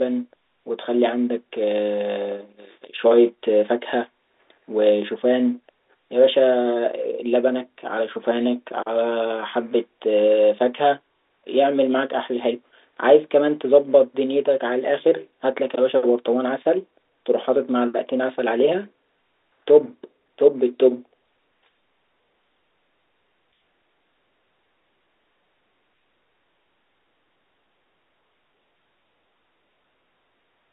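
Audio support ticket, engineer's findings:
No fault found in the engineer's findings; the speech sits in the usual telephone band of a G.711 call.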